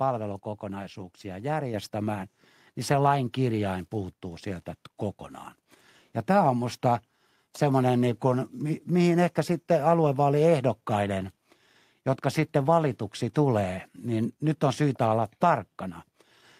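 A speech recording in which, at 1.74 s, the voice and the background noise both jump up by about 5 dB at once. That is a microphone volume stepped up: the call software judged the input too quiet and raised the device's gain in a single step.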